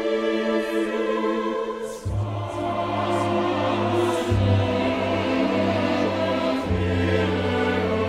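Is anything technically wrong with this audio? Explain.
No, nothing stood out as technically wrong on listening to this audio.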